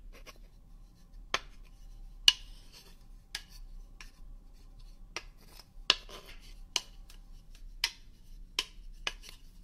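A short glitch cuts through the sound from 6.25 to 6.30 s, and another from 9.28 to 9.33 s. Both come from damaged data in a compressed stream: the decoder misreads the corrupted frames, loses sync and searches for the next valid frame header.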